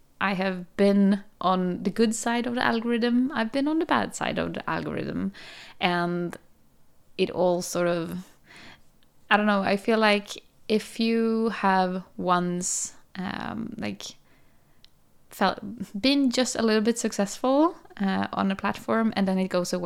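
At 15.48 s, just before "been just a little", there is a brief dropout from lost LE Audio frames. The gap lasts about 7.5 ms, which fits a single lost LC3 frame. The decoder filled it by repeating the previous frame's spectrum with randomised signs. That keeps the energy but scrambles the phase, so the speech is replaced by a short, rough burst of noise-like smear.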